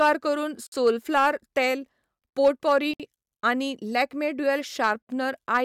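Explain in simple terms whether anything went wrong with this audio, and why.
Two things went wrong. The first is hard clipping. The speech was too loud for the recording to hold, so its peaks were sliced flat. That adds a harsh, crackly fuzz. You hear it at 0.01–0.11 s, 0.86–1.66 s, 2.44–2.78 s, 4.49–4.91 s and 5.54–5.58 s.

The second is a gap at a join of encoded pieces. The audio was saved in separate chunks and stuck back together. Each chunk kept a bit of silence at its edges. So the speech briefly drops out, then carries on. This happens at 0.67 s for 55 ms, at 2.94 s for 62 ms, and at 5.02 s for 66 ms.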